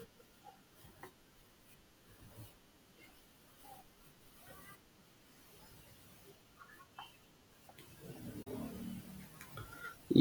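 At 8.42 to 8.47 s the speech drops out briefly: a digital broadcast dropout, where the receiver muted after losing about 32 ms of signal, which fits a single failed frame. An 8 ms fade into true silence, rather than smeared or repeated fill, distinguishes it from concealment.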